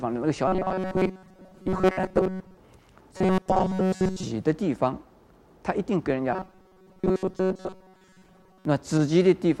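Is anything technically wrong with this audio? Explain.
Yes. Robotic sound from repeated short buffers occurs at 0.48–2.57 s, 3.17–4.23 s and 6.33–8.65 s. New audio likely arrives too seldom, so a fragment of about 5.3 ms is replayed while most real material is skipped, imposing a rigid, metallic 188 Hz buzz.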